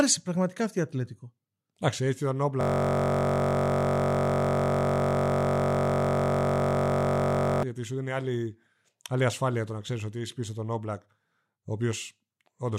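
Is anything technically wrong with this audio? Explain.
Yes. From 2.61 to 7.63 s, right after "έτσι ήταν", there is a system hang loop. The system stalled while the audio hardware kept replaying one 21.33 ms ring-buffer segment, which fits a 1024-sample buffer. Repeated hundreds of times, it becomes a steady buzz at about 47 Hz.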